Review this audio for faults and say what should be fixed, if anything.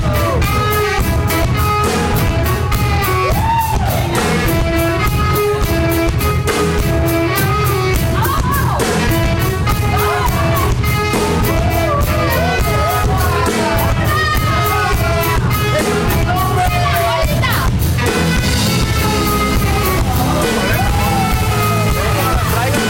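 Hard clipping runs throughout the clip, from start to finish. The signal reaches some stage about 12 dB hotter than it can pass, so every peak is sliced flat at the ceiling, and around a fifth of the samples sit pinned there. Those squared-off tops generate harmonics far above the original content, so the damage is a continuous harsh fuzz on every loud moment rather than occasional crackle. To fix it, re-record or re-export from the source with gain set so peaks stay below full scale, since flattened waveforms cannot be fully restored. To prevent it, lower the input or processing gain by at least 12 dB and leave a few decibels of headroom at every stage of the chain.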